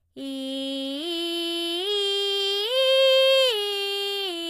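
A short music clip with HE-AAC compression damage right through it: the top end is rebuilt rather than real, so its harmonics do not line up with those below, and nothing comes through above about 14.9 kHz. The plainly audible artefacts fit a very low bitrate, likely near 20 kbps.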